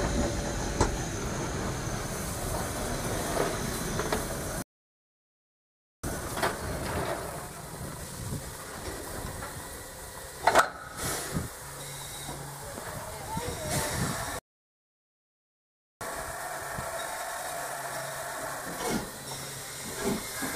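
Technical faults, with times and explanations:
4.62–6.04 s and 14.39–16.01 s, playback stall: the sound stops dead mid-flow for about 1.4 s the first time and about 1.6 s the second, then resumes. This is likely a player that ran short of data or had its output thread held up, so nothing reached the output until it recovered. On a waveform each gap is a flat line with abrupt edges; a spectrogram shows a blank vertical band across all frequencies.
6.04–9.04 s and 16.01–19.01 s, time-compressed catch-up: straight after each stall the audio runs hurried at 1.15 times normal speed for 3 s while keeping its pitch. The player is trimming its backlog by dropping small slices and cross-fading the joins. A spectrogram shows events packed closer in time with harmonics at unchanged heights; the waveform may show faint seams at the splices.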